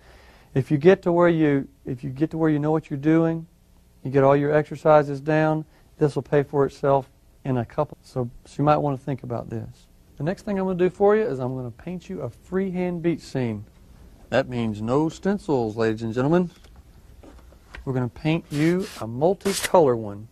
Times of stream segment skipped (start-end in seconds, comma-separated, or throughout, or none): 7.92